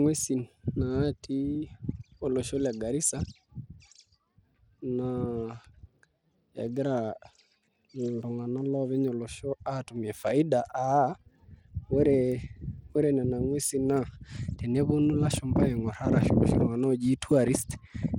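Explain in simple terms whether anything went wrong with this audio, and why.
Bluetooth SBC compression is the likely cause throughout: the upper frequency bands receive too few bits, so the speech's treble flickers or vanishes and a gritty edge appears.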